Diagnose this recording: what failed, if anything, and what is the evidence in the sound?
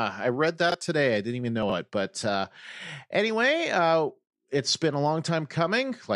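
Chunks out of order, at the driver or buffer stage. At 0.70 to 0.74 s, a short segment is briefly jumbled. A second, longer scramble comes at 1.63 to 1.72 s. Each misplaced piece lasts about 23 ms. In the first event one block plays one slot late. In the second it plays three slots late. No audio is missing. The order is wrong, and each displaced block leaves three hard joins.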